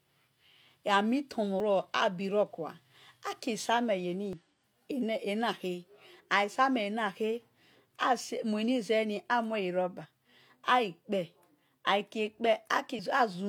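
Damaged data in a compressed stream runs through this speech recording: the decoder meets corrupted bytes, misreads the frames there, loses sync and has to hunt for the next valid frame header. Each time, the speech is disrupted, at 1.6 s and 4.33 s as brief blips, then as longer bursts from 10.01 to 10.06 s and from 12.95 to 13.00 s.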